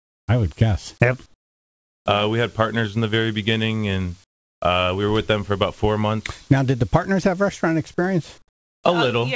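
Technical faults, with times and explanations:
0.00–0.28 s, 1.26–2.06 s, 4.24–4.62 s and 8.38–8.84 s: comfort noise in place of the background. In each gap the real background drops out. A flat, featureless hiss replaces it. That hiss is quieter, by about 27, 17, 21 and 17 dB. The likely cause is discontinuous transmission: the sender stops sending when it judges the input silent, and the receiver synthesises shaped noise. Nothing reaches above 8 kHz, which fits a wideband call codec.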